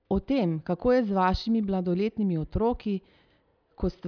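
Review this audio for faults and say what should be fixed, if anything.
Nothing in the speech signal needs fixing, as it holds steady in level and continuity throughout with no audible technical faults.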